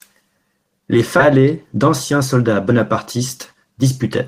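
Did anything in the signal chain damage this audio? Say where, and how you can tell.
Yes. At 1.19 s a skip ahead occurs in the network or jitter buffer: roughly 0.7 s of speech is discarded and playback jumps forward with no gap.

A jitter buffer speed-up runs from 1.33 to 2.71 s at 105% and from 3.17 to 4.03 s at 107%, trimming pitch periods to shed backlog at unchanged pitch.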